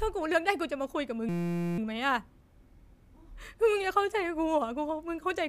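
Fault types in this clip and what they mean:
System hang loop: the machine froze while the hardware kept replaying one 5.8 ms chunk of speech, giving a steady buzz near 172 Hz for about half a second.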